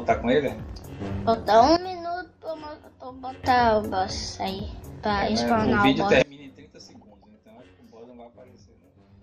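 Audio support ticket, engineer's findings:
Sudden gain jump, 1.77 s to 3.44 s: gain setting likely applied with no ramp, so digital level steps between adjacent samples. Sound and noise floor drop together by about 16 dB, then return just as abruptly at 3.44 s.

Sudden gain jump, 6.22 s to end of clip: likely another unramped gain change or bit shift. Level falls about 24 dB in a single sample, sound and background alike, and stays down to the end.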